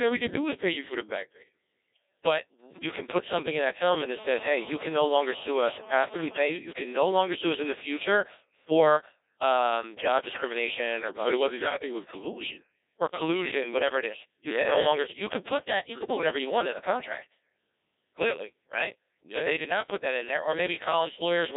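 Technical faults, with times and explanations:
Throughout, Codec 2 vocoder: heavily robotic, buzzy speech with nothing above 3.8 kHz, as the decoder rebuilds the voice from sine waves, fitting a 1.6 kbit/s mode.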